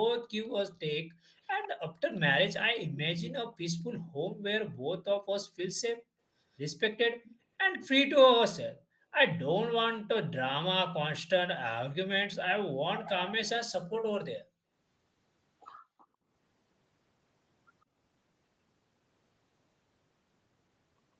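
The room background drops away abruptly at 1.01 to 1.34 s, sinking by about 40 dB before returning. This is background gated by the echo canceller: while the far side's sound played through the loudspeaker, the canceller pulled the microphone down hard, taking the ambient sound with it. Just after, from 1.43 to 1.68 s, a faint delayed copy of the speech trails the original by 150 ms, sitting around 15 dB below it. This is an echo leak, likely from a loudspeaker whose pickup the echo canceller failed to fully remove, so part of it was sent back down the line. The background gating returns at 4.01 to 4.86 s with a dip of about 37 dB. The echo leak reappears from 7.23 to 7.88 s, again 150 ms late and well under the main speech. Further gating holes, each near 40 dB deep, open at 8.76 to 9.05 s, briefly at 14.44 to 14.58 s, and at 15.79 to 16.29 s, each lasting from a fraction of a second to half a second as the canceller clamps down and then releases.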